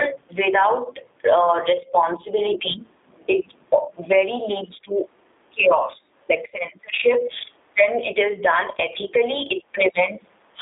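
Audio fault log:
Throughout, gain pumping: the level ducks under each loud syllable, with the gain swinging by around 15 dB. Loud and quiet passages sit unnaturally close together, so the speech sounds squashed. The likely cause is input gain set far too high, with a fast limiter or compressor clamping down on each peak and releasing in the gaps.
Throughout, G.729 codec: the speech is confined to a narrow telephone band of roughly 300 Hz to 3.7 kHz, so it sounds thin and boxy, with clearly audible roughness and a slightly synthetic, buzzy edge. This fits the G.729A variant at 8 kbit/s. The codec rebuilds each short frame from a vocal-tract filter, a pitch predictor and a few coded pulses, so fine detail is lost.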